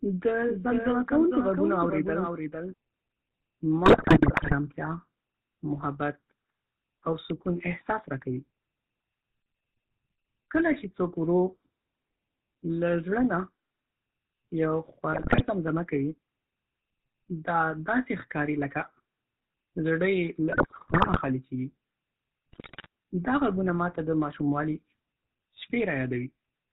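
GSM full-rate codec, throughout the clip: the speech has been squeezed through a coder that models the vocal tract and feeds it a sparse, regularly spaced pulse excitation, which fits the 13 kbps GSM full-rate scheme. Nothing survives above 4 kHz, so the sound is dull and narrow. That thinned excitation gives every voiced stretch a plainly audible buzzy, gravelly grain.

Doubled audio track, from 0.48 to 2.74 s: a second, full-bandwidth copy of the speech runs about half a second behind the original at about 5 dB lower. It has no reverberant tail or room colouring, and it appears and disappears abruptly at those edges. That clean, fixed offset most likely comes from the signal being picked up a second time through a slower path and mixed back in.

GSM bit errors, at 3.86 to 4.55 s, 15.12 to 15.42 s, 20.52 to 21.26 s and 22.52 to 22.86 s: corrupted bits reached the decoder, garbling the filter, pitch and gain parameters frame by frame. 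The speech collapses into squawks, pops and gargling, with the spectrum bent and the level jumping. The burst around 15.1 s ends just before "زمزمه کوي", and the one near 22.5 s ends just before "دا غږونه ما ته". These two are among the densest.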